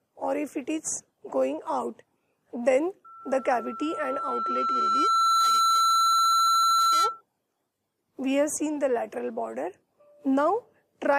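From 3.04 to 7.21 s, loudspeaker feedback squeal: a 1.3 kHz tone swells over roughly two seconds as mic-to-speaker loop gain exceeds unity, ending about 5 dB above the programme.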